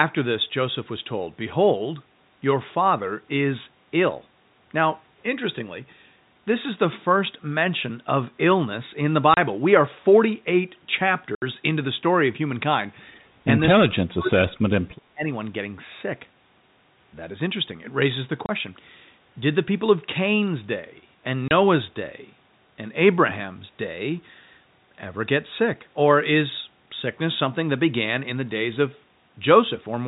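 Packet loss filled with silence hits this telephone-band speech: the receiver dropped whole packets and played nothing in their place, leaving hard-edged holes of 30 ms at 9.34, 18.46 and 21.48 s and 70 ms at 11.35 to 11.42 s, gap lengths that fit 10 ms packets. Between 13.45 and 15.26 s the speech is suppressed, likely in double talk, where an echo canceller confused the talker with loudspeaker echo and turned the line down. A shallow dip of about 5 dB comes at 13.45 to 13.49 s, then from 13.75 s roughly a second of speech drops by as much as about 40 dB. The G.711 mu-law coding at 64 kbps adds the usual 4 kHz band limit.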